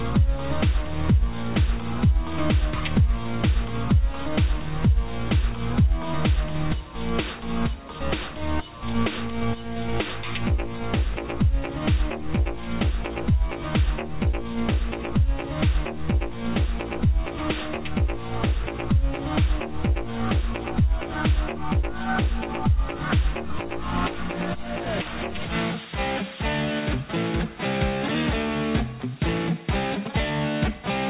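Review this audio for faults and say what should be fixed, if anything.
Nothing needs fixing: the audio carries the narrowband character of a telephone-grade call path, with no content above 4 kHz and a coding texture that fits G.711 mu-law at 64 kbps, and no faults can be heard.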